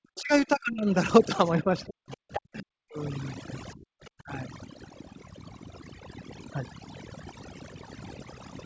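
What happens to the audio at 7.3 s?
At 7.3 s, overdone noise removal is at work, as it is throughout the clip. An overly aggressive noise suppressor pushes bands near its noise estimate far down, taking quiet parts of the speech too. The background drops and breaks up into twinkling specks.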